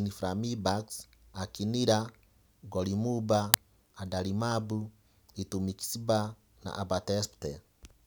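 At 3.54 s there's an uninitialised buffer: a block lasting about 2.9 ms, which fits a 128-sample buffer, went out before any audio was written into it, so leftover memory played as samples. You hear it as a sharp, loud crack cutting into the speech.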